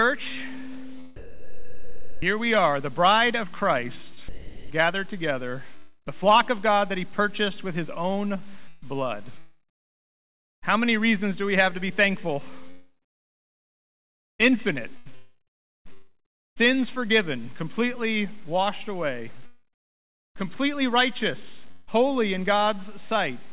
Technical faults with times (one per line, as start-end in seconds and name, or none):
1.16-2.22 sound dropped by the voice detector
4.14-4.71 sound chopped by the voice detector
5.77-6.08 long network dropout
8.68-10.64 sound chopped by the voice detector
12.70-16.58 sound chopped by the voice detector
19.46-20.48 long network dropout
21.71-21.89 long network dropout